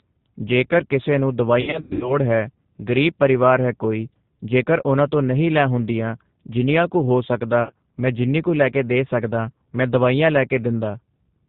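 Throughout, the speech carries plainly audible G.729 codec damage. The 8 kbit/s coder rebuilds each frame from a vocal tract filter, a pitch predictor and a few pulses. Nothing above 4 kHz survives. Voices sound band-limited, slightly rough and synthetic.

From 1.61 to 2.15 s comes VoIP packet loss concealed by the speech codec. About 260 ms is missing, scattered over 400 ms, with the longest gap 100 ms. The decoder stretches its last pitch and filter into a fading buzzy tone or coloured noise. Speech stays weak briefly afterwards. A shorter 60 ms loss at 7.63 to 7.74 s sounds the same way.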